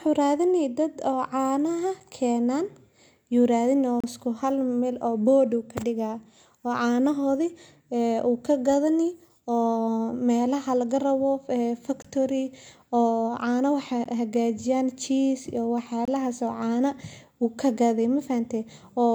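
This speech clip has five brief, hard-edged dropouts to silence at 2.0 s, 4.00–4.04 s, 12.02–12.05 s, 14.04 s and 16.05–16.08 s, each a hole of roughly 7 to 32 ms. They are a gap between stream segments. The audio is cut into 2-second segments whose timestamps leave small holes at the joins, and the player fills each hole with silence. No audio is lost, but the spacing follows the segment boundaries.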